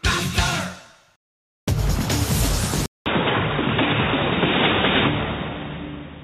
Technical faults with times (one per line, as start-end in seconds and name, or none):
2.86-6.24 input switched to a poorer device